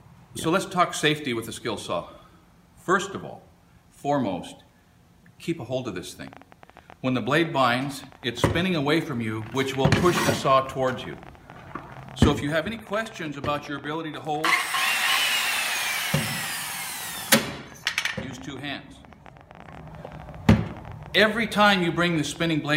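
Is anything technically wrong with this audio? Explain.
Yes. A train of clicks runs from 6.22 s to 22.70 s, about 12 per second, unevenly spaced. They are roughly as loud as the sound itself, likely from interference.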